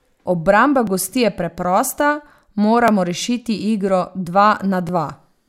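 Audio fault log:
0.87 s, 2.88 s, 4.89 s: overlapping chunks. Each new chunk starts about 7 ms before the previous one ended, so that sliver of sound plays twice at the join, giving a click or stutter every 2 s as the chunks butt together.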